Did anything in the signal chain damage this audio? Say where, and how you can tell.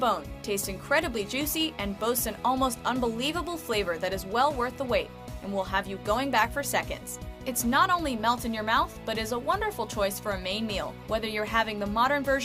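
No, nothing along the chain seems to have harmed this one, so there's no stage to point to and nothing to trace back.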